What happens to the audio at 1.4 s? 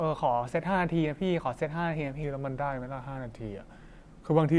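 Nothing goes wrong at 1.4 s; the speech runs on intact there.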